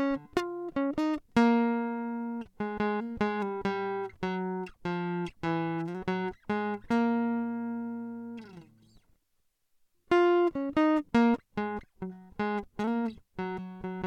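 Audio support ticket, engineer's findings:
No faults found on the music signal: continuous, nothing in the playback path to attribute to a component.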